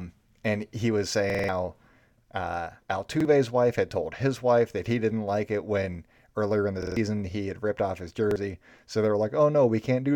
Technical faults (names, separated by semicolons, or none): repeated buffer